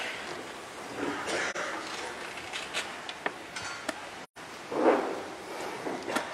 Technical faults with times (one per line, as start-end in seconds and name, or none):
1.50-1.56 AAC frame loss with muting
4.23-4.38 AAC frame loss with muting